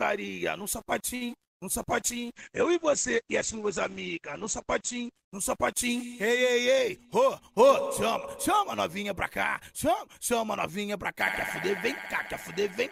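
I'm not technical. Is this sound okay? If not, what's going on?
No. There are three problems.

From 1.15 to 1.50 s there is repeated packet loss, which gives a robotic sound. Four small chunks of audio never arrived in time, the longest about 56 ms. Each hole was patched by stretching the last bit of sound, so this stretch sounds choppy.

From 1.92 to 7.57 s there is a call bitrate drop. The connection told the sender to use far less data, so the audio was packed much more crudely. It turns rough and muffled, with the high frequencies above 8 kHz cut off, and sounds worst for nearly 3 s.

From 7.05 to 7.92 s and from 8.50 to 9.04 s there are jitter buffer speed-ups. Delayed audio had piled up, so the receiver trimmed tiny pieces to catch up, about 50 ms and 40 ms in total. The sound plays roughly 4% and 6% faster at the same pitch, so the second one feels slightly hurried.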